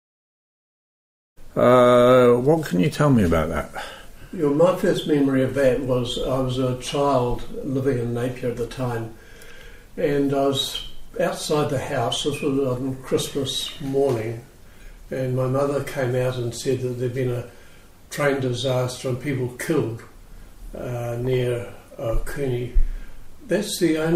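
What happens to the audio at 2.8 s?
Nothing goes wrong at 2.8 s; the audio runs on intact there, with no dropout, click or level jump.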